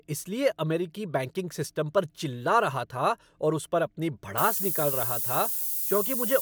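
At 4.38 s, right after "और उस पर अपनी", low bit depth with noise shaping sets in and lasts to the end. The speech is coarsely quantised, which fits about 5 bits. Shaped rounding error becomes a thin hiss, rising toward the top, roughly as loud as the speech.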